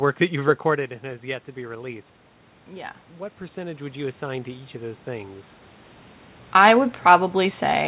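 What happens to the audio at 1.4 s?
Nothing goes wrong at 1.4 s; the audio is intact there, with no dropout, glitch or other fault at that point.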